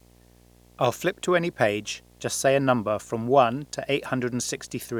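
A speech recording with video or display buzz running throughout: a screen or video cable couples into the audio, adding a 60 Hz field-rate buzz with hash above it, roughly 30 dB below the speech. On a spectrogram it shows as steady horizontal lines at 60 Hz and its harmonics. In the waveform, pauses carry a constant ripple.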